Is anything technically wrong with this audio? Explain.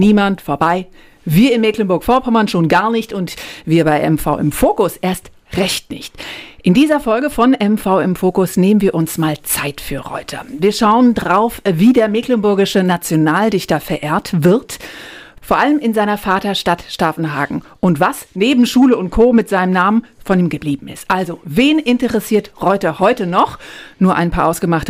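Yes. Throughout the clip the loudest peaks crackle with a brief, gritty edge, while quieter passages stay clean. This is hard clipping: the signal is driven about 5 dB beyond what one stage in the chain can carry, so every peak that overshoots is sliced flat. Only a small share of the audio, around half a percent, crosses that ceiling, so the damage is limited to the peaks, but each flattened top adds high harmonics that come through as crackle.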